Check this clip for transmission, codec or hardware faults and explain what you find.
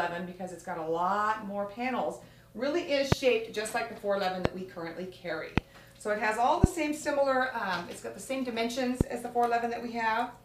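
Five loud pops are present, each lasting a little over 20 ms, at 3.12–3.14 s, 4.45–4.48 s, 5.58–5.60 s, 6.64–6.66 s and 9.01–9.03 s. Each is a single sharp transient peaking about 25 dB above the surrounding signal, with the sound continuing underneath. The likely cause is a voltage step or pulse from a connector, switch, static discharge or driver glitch, which the downstream circuitry shapes into a brief thump.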